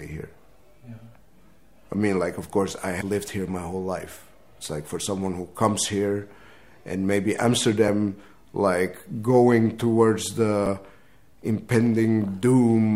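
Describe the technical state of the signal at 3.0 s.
Damaged data in a compressed stream occurs from 3.00 to 3.02 s. For about 20 ms, part of the encoded data reaching the decoder is corrupt: bytes have been lost, zeroed, overwritten or mixed with foreign data. The decoder therefore misreads or rejects the affected frames, loses synchronisation and scans forward for the next valid frame header before output resumes. The result is a brief, abrupt glitch that breaks the continuity of the sound at that point.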